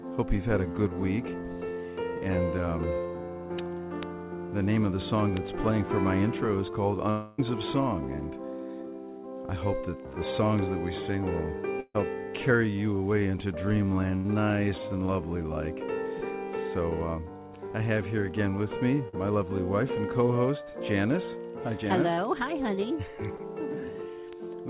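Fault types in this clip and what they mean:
bit error spike: single-sample ticks at 4.03, 5.37, 10.59 and 24.33 s, sharp and broadband, far shorter than any loss gap and unrelated to the sound.
long network dropout: from 7.1 to 7.4 s the last sound is stretched into a fading continuation for about 280 ms, likely a network stall, longer than a burst.
burst of packet loss: at 11.8 s about 140 ms goes missing, filled by a held, fading continuation ending in 40 ms of silence, shorter than the dropout.
short concealed packet loss: at 19.08 s a 40 ms hole is patched by a brief smear that blends back in, too short to fade or go silent.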